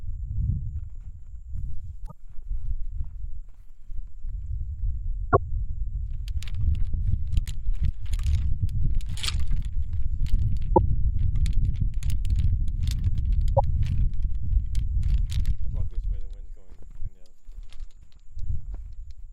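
Five short bursts of damaged data in a compressed stream break into the sound at 2.03–2.12 s, 5.29–5.37 s, 7.43–7.48 s, 10.72–10.78 s and 13.53–13.60 s, each lasting roughly 50 to 90 ms. Corrupted bytes leave the decoder unable to read those frames, so it loses sync and hunts for the next valid header, producing a brief chirp, squawk, click or short hole.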